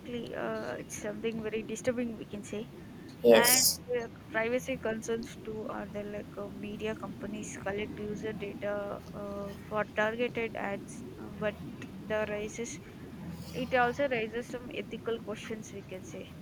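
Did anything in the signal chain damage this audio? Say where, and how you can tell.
Yes. Speech suppressed in double talk, 3.64 to 3.95 s: the speech sinks sharply, by about 30 dB at its deepest, for roughly 0.3 s. The stage is call processing. The likely cause is an echo canceller that couldn't separate near-end speech from loudspeaker echo during double talk, so it attenuated everything.

Echo leak, 4.0 to 4.06 s: a brief, faint delayed copy of the speech appears, about 30 dB below the speech and trailing it by 314 ms. This is also call processing, likely a far-end echo canceller letting a residual scrap of loudspeaker pickup return down the line.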